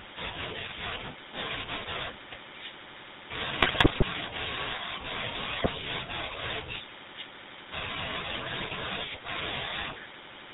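From start to finish the speech carries the GSM full-rate codec's signature: a buzzy, gravelly roughness and no content above 4 kHz, consistent with the 13 kbit/s full-rate coder. The vocal tract is modelled as a filter fed by a coarse, regularly spaced pulse excitation, so voiced sounds acquire a grainy rasp. That separates it from a simple low-pass or narrowband recording, which would sound muffled but smooth rather than rough.

GSM bit errors then break through three times, from 3.61 to 4.03 s, from 5.58 to 5.72 s, and from 8.60 to 8.74 s, the first being the longest and densest. Corrupted filter, pitch and gain values reach the decoder, so individual frames come out with a warped spectrum or a sudden level jump, heard as squawks, pops and gargling. Unlike packet loss or dropouts, nothing goes silent or repeats; the sound becomes garbled and erratic.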